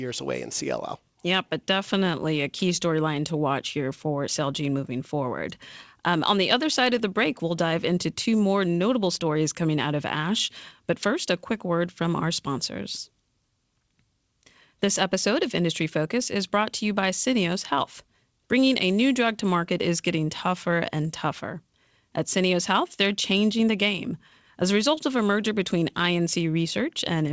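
Speech that came over a WebRTC call with G.722 at 64 kbps, which is why nothing reaches above 8 kHz, and honestly there's nothing in it that counts as a fault.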